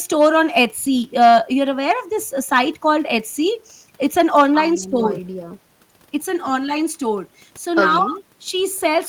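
No technical faults can be heard anywhere in this speech recording.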